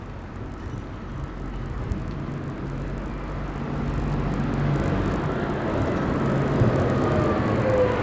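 From start to end, the resampler restarted on every block. The sound appears to have gone from 48 kHz down to 16 kHz in 20 ms blocks. Each block edge lacked its true neighbouring samples. The result is a faint 50 Hz buzz riding on the signal, gone in silence.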